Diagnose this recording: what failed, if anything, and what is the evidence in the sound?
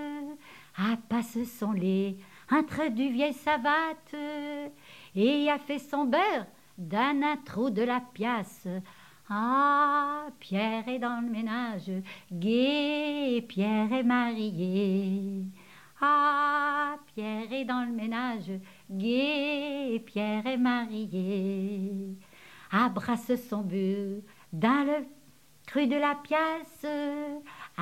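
Nothing in the recording points to a failure. No stage between capture and playback leaves any audible evidence of a problem.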